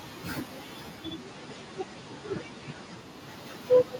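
From 0.88 to 3.34 s, digital radio blending to analogue FM adds faint hiss and lowers level about 1 dB.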